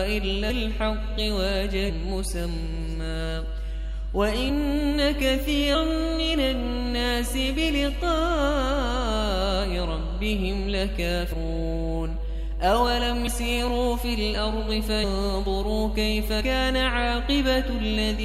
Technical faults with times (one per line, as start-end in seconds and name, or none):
0.00-18.24 mains hum
0.49 compressed frames skipped
1.88 compressed frames skipped
4.48-4.50 compressed frames skipped
5.74 compressed frames skipped
11.31 compressed frames skipped
13.26 compressed frames skipped
15.03 compressed frames skipped
16.40 compressed frames skipped